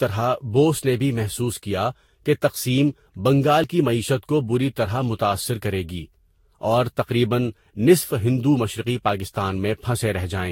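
Throughout, the speech shows generation loss: a swirly, hollow texture with smeared consonant attacks and nothing above 16.6 kHz. This likely comes from about five successive lossy passes, which fits Vorbis near 64 kbit/s, each re-quantising on a shifted frame grid.

At 3.64 s there is audio missing between chunks: a brief skip where roughly 20 ms drops out and the two sides butt together without silence. The splice point fits processing in 4-second chunks losing material at each changeover.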